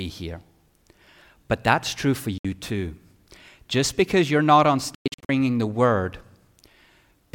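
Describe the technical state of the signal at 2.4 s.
At 2.4 s the speech cuts to silence from 2.38 to 2.45 s, a gap of about 64 ms, then resumes further along as if it had kept playing. This is likely a Bluetooth dropout, with packets arriving too late and being discarded.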